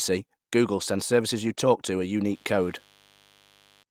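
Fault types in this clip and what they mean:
Lost packet rebuilt from error correction: Twice, at 1.47 to 1.49 s, between "sends services" and "talk to a", and at 2.75 to 2.77 s, a 20 ms stretch sounds briefly rough and grainy. That fits one lost packet each time, replaced by the low-bitrate backup copy carried in the next packet. There is no silence or click, which is what separates it from a plain dropout or from concealment that smears or repeats earlier sound.
Mains buzz: From 2.33 s, just after "talk to a", to 3.83 s, a steady, raspy buzz sits about 35 dB below the speech. Its pitch is built on 50 Hz mains, with harmonics reaching well up into the kilohertz range from switching spikes twice per cycle. That spread of sharp harmonics is what separates it from a smooth low hum, which would be a plain 50 Hz tone with few overtones.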